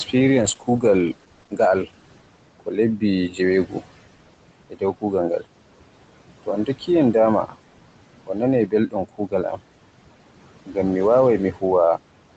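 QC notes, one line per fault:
Throughout: noise suppressor artifacts. Steady background is pulled down by about 18 dB between phrases and rises under them; spectrogram shows a pumping noise floor with fluttery residue.
0.07–5.46 s, 6.43–9.61 s, 10.66–11.63 s: speech cut by the noise suppressor. Soft consonants and endings taken for noise are dipped by up to about 16, 18 and 14 dB. Totals are roughly 0.7, 0.5 and 0.2 s, heard as swallowed syllables and visible as notched gaps in the waveform envelope.
0.40–2.79 s: call bitrate drop. The Opus encoder falls from 32 to 12 kbps and stays at the lowest rate for 1.08 s. The coarser coding sounds rough and watery, with the upper band thinning on the spectrogram until recovery.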